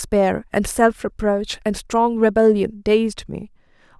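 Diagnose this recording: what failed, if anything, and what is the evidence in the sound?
Nothing failed in this recording, and there is no evidence in the sound of any fault.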